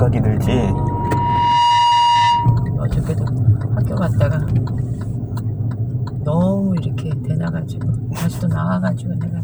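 A recording of everyday sounds carrying loudspeaker feedback squeal from 0.43 to 2.8 s: a single 952 Hz tone swells over roughly a second to sit a little above the sound itself. That self-building rise, rather than a steady fixed-level whine, marks a microphone re-amplifying its own loudspeaker.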